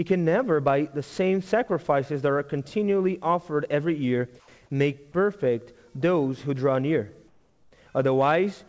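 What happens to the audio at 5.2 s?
Nothing goes wrong at 5.2 s: the audio runs through intact, still carrying the call-codec band limit that leaves nothing above 8 kHz.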